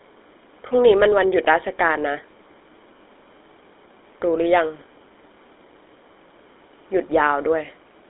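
Throughout the speech, a GSM full-rate codec is plainly audible. The band is squeezed to roughly 300 Hz to 3.6 kHz. The codec rebuilds the excitation from sparse pulses, leaving a buzzy, gravelly roughness. That fits 13 kbps GSM full rate.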